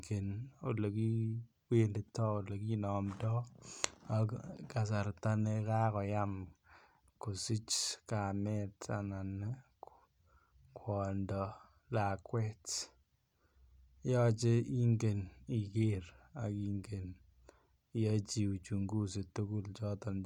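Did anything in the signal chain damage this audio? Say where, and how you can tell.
Yes. At 0.80 s the speech has a single sharp click, a thin vertical line across the spectrum. That is dropped samples: a couple of samples vanish, and the waveform jumps to a later value. The likely stage is the driver or buffer handoff.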